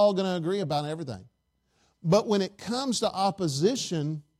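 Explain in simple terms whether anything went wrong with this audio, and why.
Nothing went wrong with this recording: the speech has no technical faults to point to at any moment.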